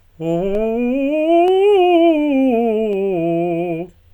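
Dropped samples at 0.55, 1.48 and 2.93 s: three sharp clicks in the music, each likely from a fraction of a millisecond of samples lost, so the waveform jumps abruptly.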